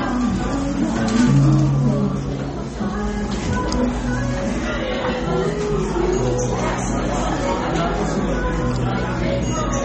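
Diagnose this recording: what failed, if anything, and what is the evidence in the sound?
The fault sits at the codec stage: the audio was likely squeezed through MP3 encoding at a very low bitrate, the damage pointing to something around 32 kbps. From start to end, nothing remains above about 8.4 kHz, where the encoder cut the treble at a fixed frequency to save bits. Below that, weak frequency lines drop in and out between frames, giving a plainly audible watery, swirling texture to the sound.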